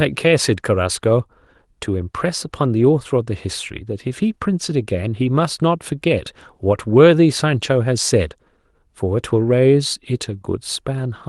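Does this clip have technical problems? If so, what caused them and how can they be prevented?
No, nothing in this speech recording registers as a technical fault, so there is no cause to trace and nothing to prevent.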